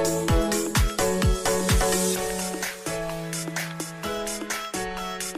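No technical faults can be heard at any point in the audio.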